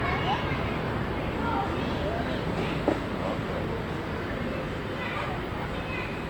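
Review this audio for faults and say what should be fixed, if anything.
Generation loss runs through the whole clip: swirly, hollow and smeared, with blurred attacks, likely from around four passes through Opus, and it fits roughly 48 kbit/s. To prevent it, keep a lossless master and encode only once.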